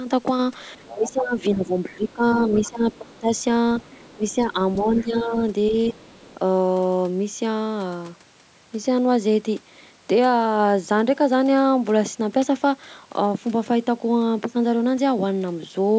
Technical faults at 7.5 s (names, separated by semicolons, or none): none